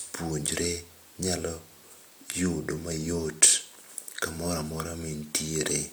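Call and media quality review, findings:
No audible faults found.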